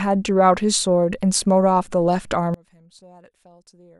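From 2.54 s to the end, the speech collapses by about 29 dB in mono, likely one channel inverted, so the shared centre content cancels.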